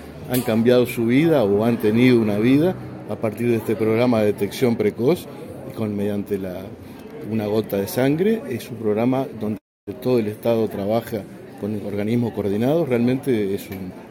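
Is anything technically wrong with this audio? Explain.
Yes. There is a call audio freeze from 9.57 to 9.89 s. The sound stalls for about 0.3 s. A brief tail of the last sound carries on, then it goes silent for about 270 ms. Afterwards the audio resumes exactly where it stopped, with nothing lost. Everything after it runs about 297 ms late. The likely cause is packets held up in transit, so the jitter buffer ran dry and the receiver filled the wait.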